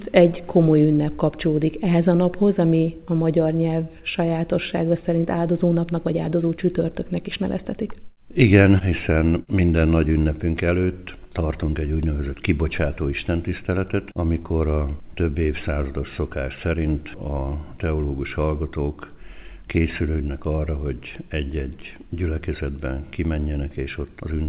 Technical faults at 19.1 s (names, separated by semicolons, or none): none